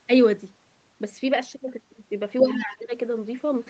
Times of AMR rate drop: none

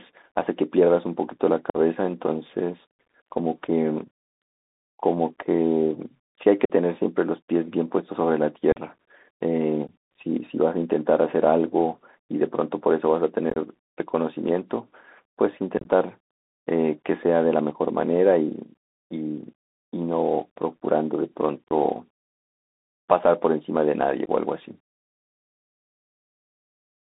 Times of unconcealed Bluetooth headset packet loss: 1.70-1.76, 6.65-6.71, 8.72-8.77, 9.87, 13.50-13.58, 15.78-15.87, 21.68-21.72, 24.25-24.29

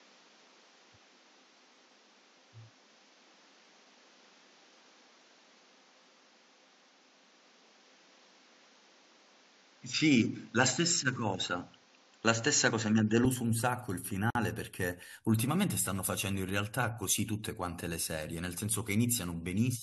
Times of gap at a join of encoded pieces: 14.30-14.35

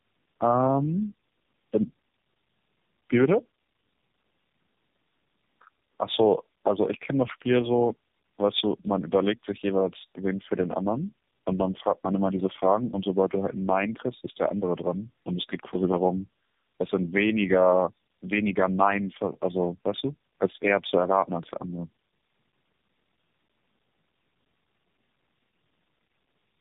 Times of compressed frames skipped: none

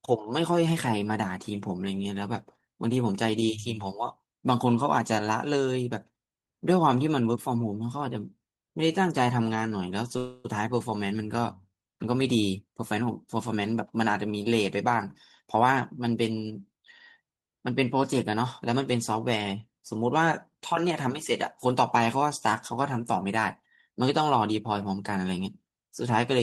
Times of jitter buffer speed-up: 13.65-16.51

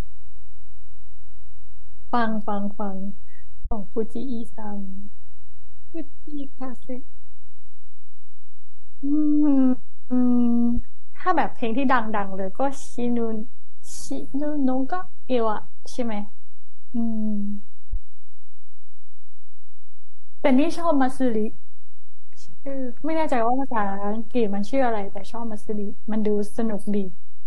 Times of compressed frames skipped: none

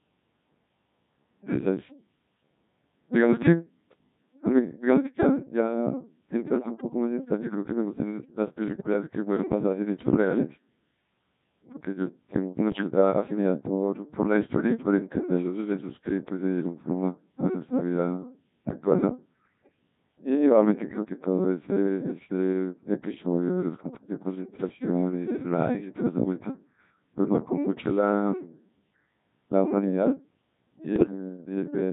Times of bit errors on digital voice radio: 6.49-6.81, 8.68-8.93, 12.72-12.90, 30.96-31.11

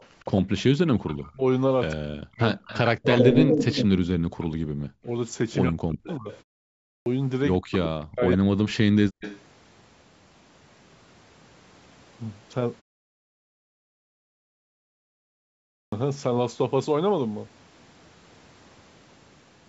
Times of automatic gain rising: none

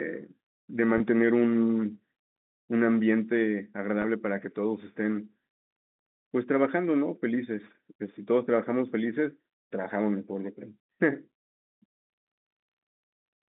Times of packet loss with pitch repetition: 0.98-1.00, 4.02-4.04

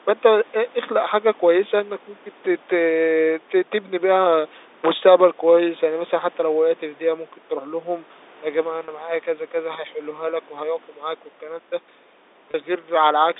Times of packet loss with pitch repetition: 8.85-8.88, 12.51-12.54

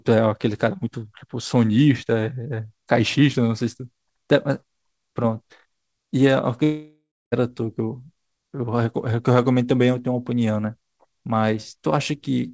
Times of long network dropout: 6.64-7.34

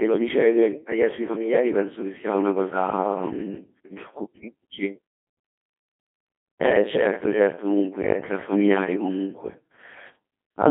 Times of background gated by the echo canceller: none

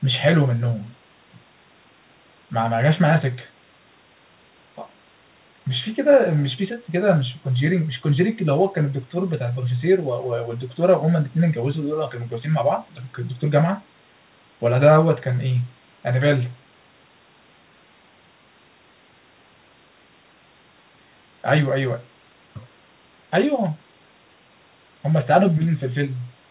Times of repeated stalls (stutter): none

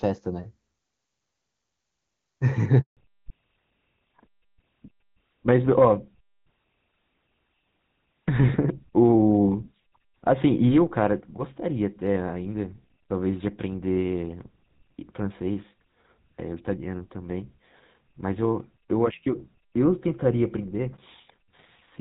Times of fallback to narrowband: 2.97-22.01

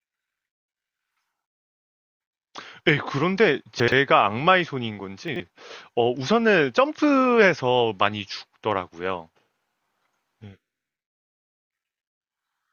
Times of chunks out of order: 3.80-3.92, 5.28-5.40

